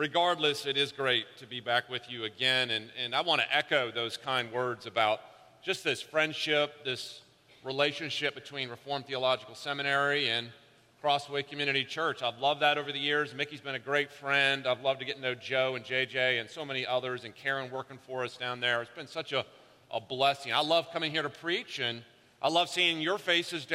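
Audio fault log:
No fault to log for this audio.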